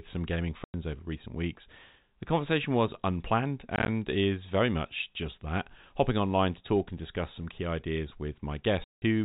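Speech over a narrowband telephone-style G.711 channel shows packet loss filled with silence: hard-edged flat gaps in the waveform and blank spectrogram columns at 0.64–0.74 s, scattered holes of up to 20 ms across 3.76–3.88 s, and 8.84–9.02 s. The hole lengths fit 10 ms packets.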